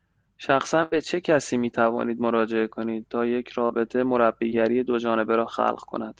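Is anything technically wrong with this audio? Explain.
Yes, the speech has packet loss in three places. At 0.83 to 0.94 s there is a burst of packet loss: about 80 ms never arrived, and the receiver stretched the last sound into a fading buzz or hiss before jumping ahead with that stretch gone. Its length and audible fade set it apart from the briefer dropouts. Short concealed packet loss occurs at 3.66 to 3.71 s (about 40 ms) and at 4.49 to 4.53 s (about 20 ms). Each hole was patched by extending the preceding sound and blending back, so each is only a quick smear or wobble.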